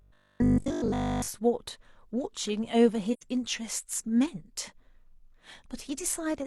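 Speech, with two faults. From 0.02 to 1.28 s, new audio likely arrived too seldom, so the player kept repeating 20 ms buffers in place of most of the real signal. This produces a robotic sound from repeated short buffers: a rigid, metallic 50 Hz buzz that only loosely tracks the speech. From 3.13 to 3.23 s there is AAC frame loss with muting. The decoder zeroed the missing spectrum, leaving a soft-edged gap of about 85 ms, which fits two lost frames. The audio fades out and back in.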